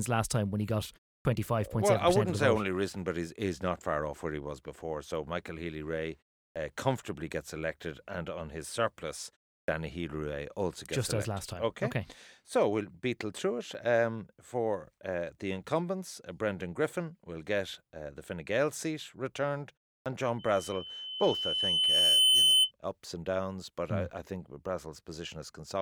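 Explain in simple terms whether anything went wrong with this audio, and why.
Several things went wrong in this speech recording.

The first problem is a clipped start after a pause, heard at 1.21, 6.52, 9.64 and 20.02 s. Each time, the speaker has just paused for about a third of a second. The playback device drops into a sleep state in that silence and takes roughly 40 ms to wake up, so the opening sound of the next word is cut off and the speech begins abruptly.

The second problem is a loudspeaker feedback squeal from 20.39 to 22.72 s. The microphone is picking up the loudspeaker it feeds, and at 3 kHz the sound going round that loop gets stronger on each pass. The result is a single high-pitched tone that swells over about two seconds until it is clearly louder than the speech.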